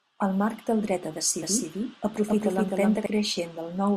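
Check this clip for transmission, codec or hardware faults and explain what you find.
One fault is present, a doubled audio track. From 1.42 s to 3.06 s, right after "marc del dret a", a second full-band copy of the speech runs about a third of a second behind, at roughly equal level. It has no decay or room colour, and it cuts in and out abruptly. The likely cause is the signal being captured again through a slower path.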